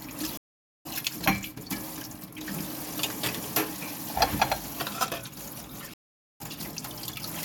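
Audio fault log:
0.37–0.87 s and 5.94–6.41 s, stream reconnect: the connection dropped twice and the player restarted a fresh decoder mid-stream. Each time the sound cuts to silence for 0.48 s and 0.46 s, then resumes roughly 0.5 s and 0.4 s further along, skipping material.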